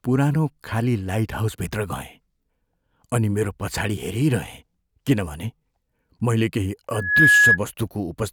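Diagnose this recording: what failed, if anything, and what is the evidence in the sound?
What failed here is loudspeaker feedback squeal, an acoustic loop between the playback speaker and the mic rather than anything digital. Right after "मैले केही" at 6.93 s a pure tone near 1.7 kHz appears, swells over roughly a third of a second to sit about 10 dB above the speech, then drops out at 7.58 s. The mic was catching its own speaker output, and at that frequency the loop gain topped one, so it kept feeding itself until the loop broke.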